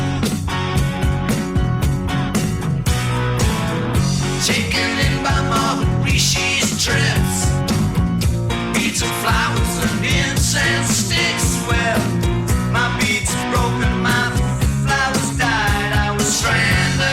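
An adaptive stream starting at a low bitrate is the fault here: the player opened on a cheap rendition to begin quickly, then switched to a better one after measuring the connection. From 0.0 to 4.0 s the audio sounds dull, with missing or synthetic treble and heavier codec artefacts, which fits Opus at around 24 kbit/s. At 4.0 s the quality jumps abruptly with no gap, consistent with a step to around 64 kbit/s.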